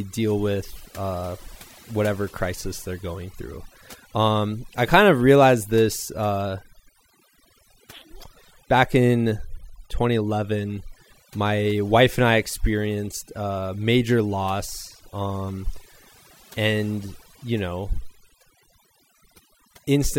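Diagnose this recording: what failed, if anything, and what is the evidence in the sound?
Overdone noise removal at the processing stage, throughout: bands near the noise estimate are cut, leaving twinkling specks in near-silent gaps and quiet parts of the voice cut away, unlike codec band-limiting's steady dullness.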